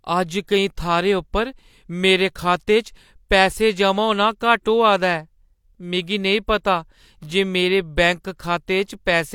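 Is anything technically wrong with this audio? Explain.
Yes. The speech has one pre-echo fault, at about 0.47 s. A transform codec spreads its quantisation noise across each block it codes. Here a sharp attack sits late in a block. The noise meant to hide that loud moment leaks into the quiet stretch just before it. So a short hiss arrives about 10 ms ahead of the attack. The onset itself loses its crispness and sounds smeared.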